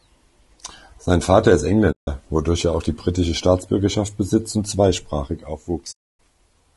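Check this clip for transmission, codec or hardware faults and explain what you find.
Two kinds of fault are audible in this speech.

Low-delay AAC compression, likely AAC-ELD, runs throughout. It codes about 500 frequency lines a frame with a low-delay window, and the bit budget sounds like about 32 kbps. The voice comes out rough and grainy, with noise filling the gaps between harmonics.

AAC frame loss with muting occurs from 1.92 to 2.08 s, about 160 ms, just before "wodurch er auch die", and from 5.91 to 6.20 s, about 280 ms, just after "besitzt und zweisprachig". The decoder zeroed the missing frames, consistent with roughly eight and fourteen lost frames. The overlapping windows fade the sound out and back in, leaving soft-edged holes.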